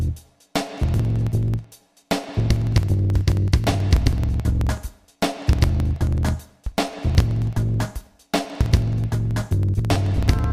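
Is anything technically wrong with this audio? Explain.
Yes. From 0.08 s to 10.44 s there are periodic USB or driver dropouts. Something in the system stalls the USB bus or audio driver every 54 ms, and each time around 10 ms of audio is simply skipped, not padded with silence, so the signal jumps ahead. Repeated some two hundred times at this steady rate of about 18 per second, the splices come through as an evenly spaced train of ticks or pops that sound wherever there is signal.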